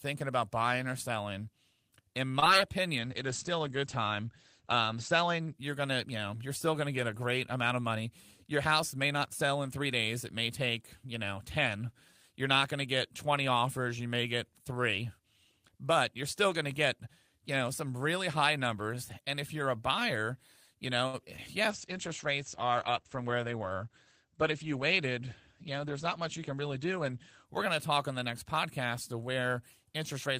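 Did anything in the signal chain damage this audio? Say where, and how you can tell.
Yes. The damage is all on the network and codec side of the call.

Short stalls from a late packet occur at 2.27 to 2.32 s and at 21.07 to 21.15 s, just after "you're a buyer you". The sound is held for about 23 ms and then 61 ms before resuming unchanged. The jitter buffer ran dry and the receiver stretched the last sound until the packet arrived.

Short concealed packet loss follows each stall, at 2.40 to 2.44 s, 21.25 to 21.29 s and 21.37 to 21.40 s. Each lost 20 ms of audio and is heard as a brief smear or wobble. The decoder extrapolated the preceding sound to cover the gap, then crossfaded back into real audio.

A call bitrate drop runs from 2.99 to 6.08 s, ending before "you know you're still". The encoder fell from 32 to 14 kbps for about 1.8 s at its lowest, and bandwidth narrowed from 20 kHz to 8 kHz. 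A second drop runs from 21.71 to 27.54 s, before "going to talk on", going to 13 kbps for 5.8 s. Both passages sound muffled and grainy.

A jitter buffer speed-up occurs at 23.17 to 23.47 s. Playback runs at about 112% speed with unchanged pitch, so the speech sounds briefly hurried. The receiver trimmed a few tens of milliseconds in pitch-period slices to shrink a buffer that had grown too deep.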